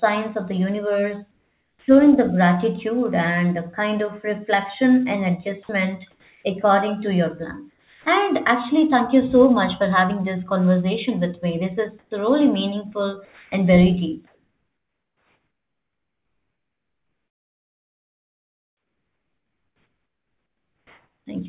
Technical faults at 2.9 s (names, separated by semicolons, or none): none